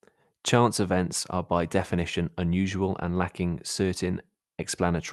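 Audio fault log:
No faults heard anywhere in this speech recording.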